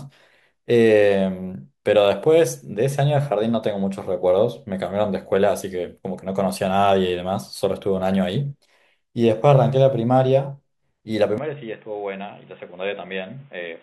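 At 11.38 s the speech abruptly turns narrow and boxy through to the end, with nothing above 3.8 kHz, a drop of roughly 10 dB and a new, faint noise floor, with no gap at the switch. This is likely an input switched to a poorer device. Tone, level and background noise all change together, which is what sets it apart from a simple low-pass filter.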